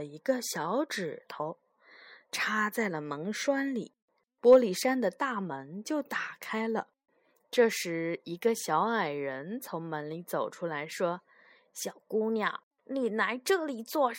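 No technical faults can be heard anywhere in this recording.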